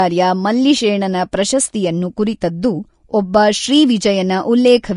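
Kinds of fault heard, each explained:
Vorbis compression: The speech has nothing above about 10.6 kHz, so the top end sounds dulled. Treble detail is rendered as grainy hiss of similar energy. Sibilants and consonant attacks sound rough and smeared. This plainly audible damage fits a low bitrate, likely around 34 kbps.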